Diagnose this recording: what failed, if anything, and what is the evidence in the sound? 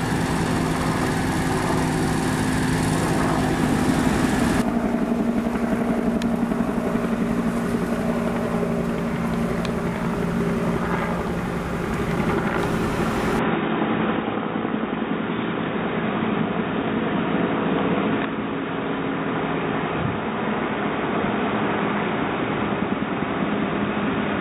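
From 13.39 s to the end, the sound turns dull with nothing above 3.8 kHz, and a new background noise sits roughly 35 dB below the signal. This points to the input likely being switched to a poorer device at the driver stage, with no gap and about the same level at the switch. A codec bandwidth drop would not bring its own noise floor.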